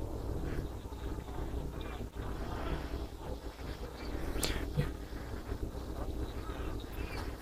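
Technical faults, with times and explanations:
throughout: overlap-add ripple, a metallic buzz with extra tones around the voice from a ripple around 300 Hz, about 11 dB deep, because windowed frames were rejoined with an overlap that doesn't sum to constant gain.
2.16 to 7.29 s: periodic USB or driver dropouts, about fifty ticks every 0.1 s, each skipping roughly half a millisecond as a blocked bus or driver interrupts playback.
6.92 to 6.95 s: compressed frames skipped, a sudden join where roughly 50 ms of audio jumps ahead because whole coded frames were missing or rejected.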